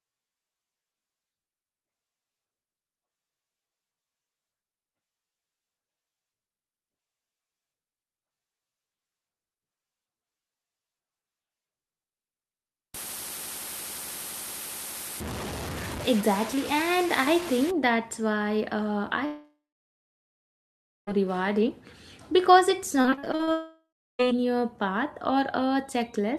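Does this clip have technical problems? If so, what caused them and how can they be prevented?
Yes. From 12.94 to 17.71 s, just before "that's why uh", the speech was likely reduced to very few bits and truncated without dither. The rounding error tracks the signal at roughly 10 dB below it, so the sound turns grainy and gritty, consistent with around 5-bit resolution. Keeping full bit depth through processing, and dithering whenever reduction is unavoidable, prevents this.

Between 19.25 and 21.09 s, after "that's why uh" and before "rewarding because it's", a long network dropout likely cut off arriving audio. The receiver stretched the last sound into a fading buzz, then about 1.5 s of silence followed. The same happens again from 23.52 to 24.25 s, with about 0.3 s of silence. A more stable connection and a larger jitter buffer prevent these.

From 23.01 to 23.50 s, right after "rewarding because it's", repeated packet loss punched eight short holes, the longest 41 ms, into the stream. 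Concealment patched nearly half the span by extending the last sound, so it comes out choppy with pieces missing. Reducing network congestion and adding forward error correction prevent this.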